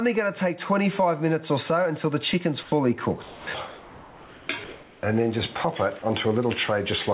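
Gain pumping runs through the whole clip, with the level swinging by around 20 dB, which squashes loud and soft parts together. The likely cause is gain set far too high, with a fast limiter clamping down. The level moves in step with the loud sounds, which separates it from the flat noise patches below.

Comfort noise replaces the background at 2.63 to 2.72 s, again at 3.68 to 4.49 s, and at 4.64 to 5.03 s. In each gap the natural room texture is swapped for a smooth, featureless hiss. It is about 3 dB and about 2 dB quieter in the first two gaps and about 2 dB louder in the last. Likely cause: the sender stopped transmitting, and the receiver synthesised noise roughly shaped like the background. Unlike pumping, these patches do not swell and duck with the loud sounds.

From 3.23 to 3.47 s the sound is dropped by the voice detector. About 90 ms of real sound vanishes into the same steady noise before the audio resumes, likely because the detector mistook quiet material for background. 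What sets it apart from the plain comfort-noise gaps is that actual sound is cut off, not just background.

Throughout, nothing is heard above about 4 kHz, consistent with a narrowband call codec such as G.711.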